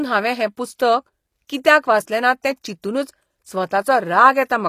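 Throughout, s sounds are gritty and metallic and nothing reaches above 15 kHz, likely HE-AAC compression rebuilding the treble from copied lower bands.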